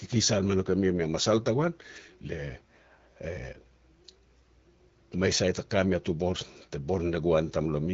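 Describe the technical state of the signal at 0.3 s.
At 0.3 s the signal is intact, with the speech carried cleanly through the AMR wideband (HD Voice) codec at 12.65 kbit/s.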